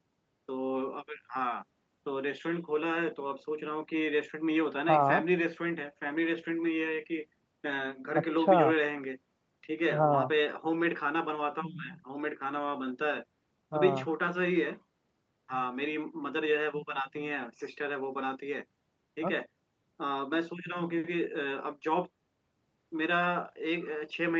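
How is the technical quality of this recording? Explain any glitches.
No glitches to report: the speech has the ordinary character of a call, with nothing above 8 kHz, a band limit that fits an Opus call link running at about 32 kbps.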